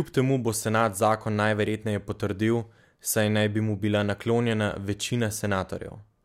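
No technical faults are audible.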